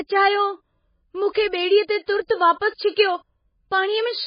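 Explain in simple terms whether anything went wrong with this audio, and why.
Two things went wrong here, and they're related. The whole recording has heavy MP3 compression damage, likely from being squeezed into a very small file. The encoder cut away everything above 5 kHz, so the speech sounds dull and muffled, with none of the crisp top end. With so little room to work in, it also drops quieter parts of the sound and brings them back from moment to moment, which gives the voice a watery, swirly quality.

The second problem is pre-echo, a side effect of that same compression. The encoder handles sound in small chunks and spreads its noise evenly across each one. When a sudden, sharp sound lands late in a chunk, that noise also fills the quiet gap just before it. You can hear this as a short hiss from 1.31 to 1.35 s and again at 2.28 s, and each of those attacks comes across soft and smeared.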